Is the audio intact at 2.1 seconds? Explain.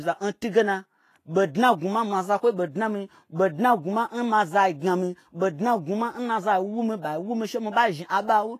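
No, Vorbis compression runs throughout, including 2.1 s: nothing sounds above 14.2 kHz, and grainy, hissy treble suggests likely coarse quantisation at a low bitrate, fitting roughly 31 kbps.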